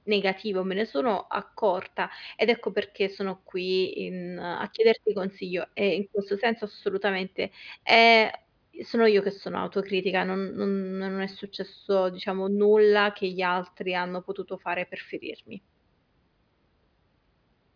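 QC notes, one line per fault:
No faults found on listening to this speech clip.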